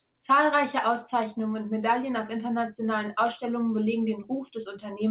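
No technical faults are audible.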